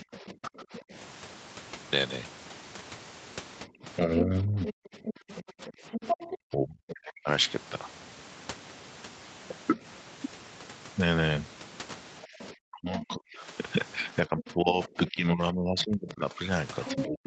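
From 0.01 to 0.94 s, the echo canceller likely failed to remove the far end's loudspeaker signal, so the other side's voice leaks through at about 15 dB below the talker. Over nearly the same span, 0.02 to 0.93 s, speech is suppressed in double talk: with both sides active, the canceller likely turned the near talker down too, dropping them by up to about 30 dB over roughly 0.7 s.

From 3.67 to 7.28 s, the same double-talk suppression likely recurs more deeply. The talker drops by up to about 35 dB for roughly 3 s. Inside that stretch, from 4.65 to 7.12 s, the other side's voice leaks through strongly at about 5 dB below the speech, likely because the canceller did not remove all of the echo.

At 9.76 to 9.84 s there is a brief dip of about 5 dB, a short 70 ms likely suppression in double talk.

From 12.23 to 13.14 s, faint leakage of the other side's voice, about 20 dB down, likely comes from residual echo. 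From 12.25 s to the end, double-talk suppression likely holds the talker down by up to about 35 dB. From 14.26 s onward, the far voice leaks through prominently at about 5 dB below the speech, competing with the damped talker.

Throughout, nothing is present above 8 kHz. That fits a wideband call path through the Opus codec.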